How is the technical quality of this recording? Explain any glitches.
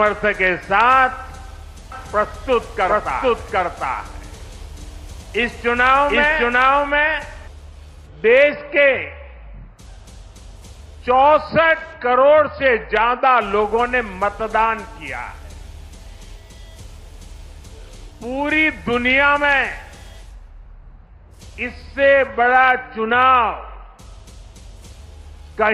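The recording has one clear glitch, a doubled audio track from 1.92 s to 7.48 s. The likely cause is the same signal reaching the mix twice, either through a second, slower capture path or an edit that left two copies out of step. A second full-band copy trails the original by roughly 0.7 s at about the same level, with no decay or room colour. The audio sounds stacked and confused, and the doubling starts and stops abruptly.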